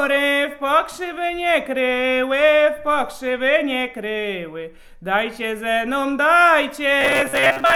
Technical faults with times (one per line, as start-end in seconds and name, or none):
7.01-7.75 robotic sound from repeated short buffers